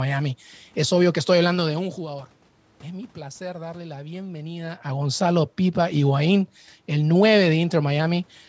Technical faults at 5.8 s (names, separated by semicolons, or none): none